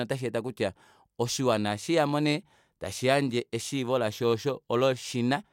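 No technical faults are audible.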